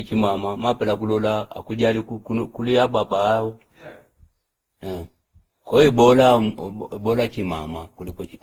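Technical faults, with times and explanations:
Throughout, generation loss: swirly, hollow, smeared speech with blurred attacks, likely from roughly ten re-encodes on shifting frame grids, consistent with a 48 kbit/s Opus chain.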